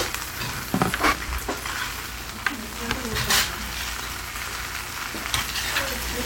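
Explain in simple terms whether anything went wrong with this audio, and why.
Something did go wrong, briefly: at 1.12 to 1.14 s there's a quick glitch from damaged data in a compressed stream. A bit of the stored file got scrambled, so the decoder misread that spot and had to hunt for the next clean chunk before the sound carried on.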